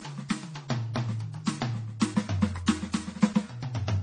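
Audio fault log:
Throughout: transcoding between lossy codecs. The music has nothing above 9.9 kHz. Two sets of coding artefacts are audible at once, those of the first codec and those of the second. The likely cause is a low-bitrate AAC encode followed by a low-bitrate MP3 re-encode. The second codec spent its limited bits reproducing the first codec's damage and added its own, while the lower cut-off in the chain remained.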